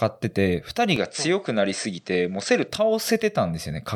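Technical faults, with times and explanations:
0.96–2.68 s, input switched to a poorer device: the speech abruptly loses all content above 8.7 kHz and sounds duller, with faint new background noise but no gap or level jump, likely because recording moved briefly to a narrower-band microphone.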